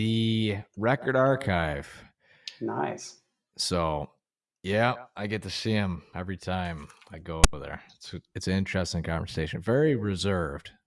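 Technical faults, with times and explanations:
7.44 to 7.53 s, file tags played as audio: right after "him every time I" there's a hard-edged burst of static, just under a tenth of a second long. A block of text tags got read as if it were sample data, so the character bytes turn into a loud, gritty rasp pushed off to one side. The zero padding at the end of the block plays back as a brief dead silence before the speech picks up again.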